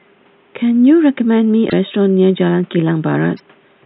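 At 1.69 to 1.73 s, and again at 3.36 to 3.40 s, the speech jumps ahead. A brief glitch marks each gap. That fits 26.1 ms MP3 frames. The likely cause is a broken MP3 bit reservoir: frames after a cut decode with another frame's bits.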